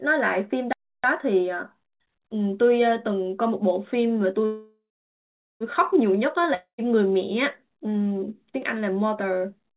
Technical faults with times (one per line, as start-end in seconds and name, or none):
0.73-1.04 playback stall
4.46-5.63 call audio freeze
6.54-6.81 long network dropout